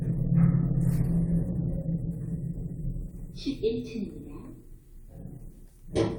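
Everyday sounds, with no audible technical faults anywhere.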